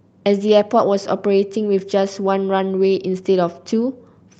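No technical faults are audible.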